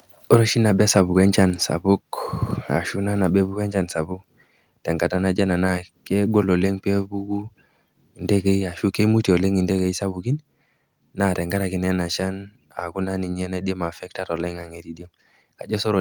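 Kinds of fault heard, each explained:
Microphone overload: Just after "oshi nabo", from 0.96 to 1.02 s, the tops of the loudest peaks are flattened against the converter's ceiling, overshooting it by about 3 dB, so a brief harsh crackle sits on that syllable. The likely cause is input gain set too high at the microphone. Unlike codec artefacts, which smear or warble over longer stretches, this is a short, hard-edged distortion tied to one level peak and touching only a small share of samples.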